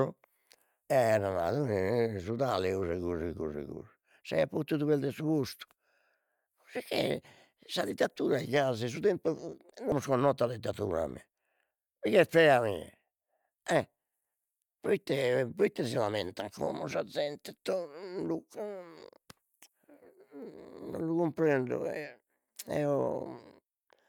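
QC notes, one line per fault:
9.92 s, audio missing between chunks: the recorder likely works in 10-second chunks, and here it drops a short stretch of signal, roughly a fifth of a second, while closing one chunk and opening the next. The two edges are butted together with no gap of silence, so the speech jumps forward abruptly instead of pausing. The listener hears a sudden skip, with a brief piece of the utterance simply gone.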